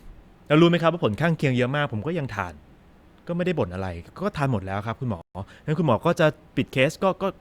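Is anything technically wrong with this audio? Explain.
Yes. From 5.21 to 5.35 s the speech drops abruptly to silence for about 134 ms, then carries on. This is likely a Bluetooth stall: interference delayed packets, the headphones' buffer ran empty, and playback paused until the retransmitted audio arrived.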